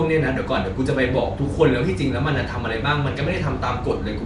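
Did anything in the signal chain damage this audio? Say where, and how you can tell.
Yes, at the codec: throughout, the speech has a hissy, smeared, underwater sound and nothing above 10.6 kHz. This is likely Nellymoser compression near 44 kbps. The noise-filled bands set it apart from MP3 swirl.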